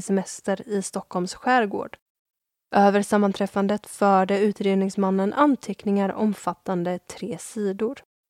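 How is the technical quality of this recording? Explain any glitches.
No glitches or technical faults can be heard here.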